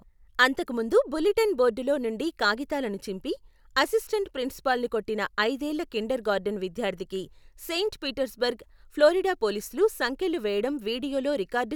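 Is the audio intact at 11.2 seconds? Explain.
Yes, at 11.2 seconds the speech plays through intact, with no dropout, click, distortion or other audible fault at that moment.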